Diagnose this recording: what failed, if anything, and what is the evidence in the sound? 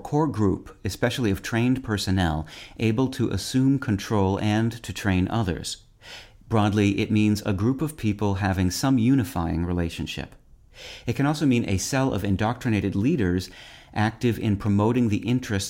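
Nothing in this speech recording stood out as a problem on listening.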